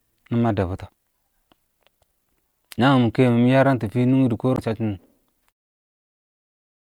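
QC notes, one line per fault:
0.85–0.89 s and 4.55–4.59 s: damaged data in a compressed stream. Corrupted frames throw the decoder off sync, so the audio glitches briefly and it jumps ahead to the next clean frame header.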